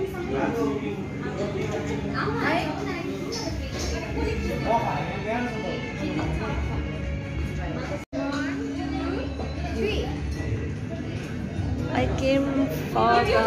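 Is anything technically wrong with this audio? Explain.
No, nothing technically wrong turns up anywhere in this audio.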